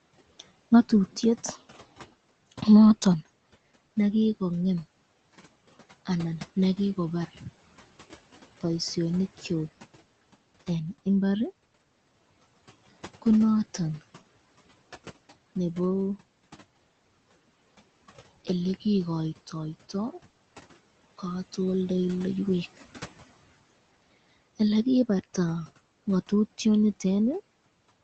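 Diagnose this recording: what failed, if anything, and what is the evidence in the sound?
At 20.29 s the speech turns into a held, fading buzz or hiss for about 80 ms, then resumes at 20.39 s with about 80 ms of speech skipped. This is a burst of packet loss on the network: consecutive packets were lost or arrived too late to be played, and the receiver's concealment stretched and faded the last sound across the gap.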